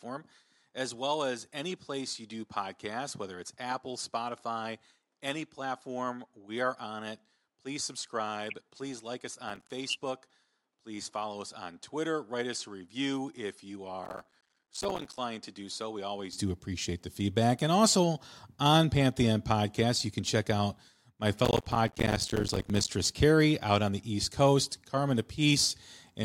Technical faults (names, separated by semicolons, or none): input switched to a poorer device; processor overload crackle